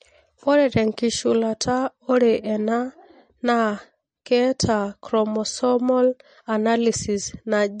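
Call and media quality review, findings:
Whole clip: speech sounds watery and swirly, nothing above 9.1 kHz, and the codec damage is plainly audible. Likely MP3 compression starved for bits, which fits something around 40 kbps. The encoder lops off the treble and drops weak frequency lines frame to frame, so the texture flickers.

4.25 s: a brief hiss creeps in about 10 ms ahead of a sharp attack, and the onset sounds smeared. That's pre-echo. The codec spreads its quantisation noise across the whole block, so it spills into the quiet moment before the hit.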